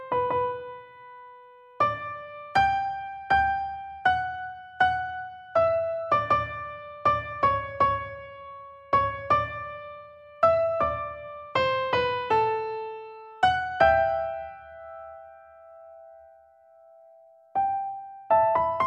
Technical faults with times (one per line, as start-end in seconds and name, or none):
none